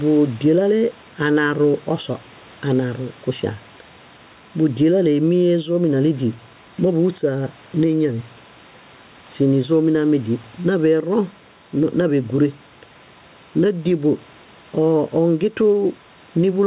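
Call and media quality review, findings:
Gain pumping, throughout: input gain likely set far too high, with a fast limiter/compressor clamping on every loud speech peak. Level swings of around 5 dB. The dynamics are squashed.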